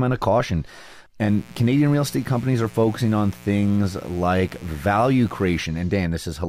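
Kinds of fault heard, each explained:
Mains buzz: a steady, raspy buzz sits under the speech from 1.24 s to 5.65 s, roughly 25 dB below it. Sharp electrical switching spikes leak in twice per 60 Hz cycle, spraying harmonics of 60 Hz up into several kilohertz.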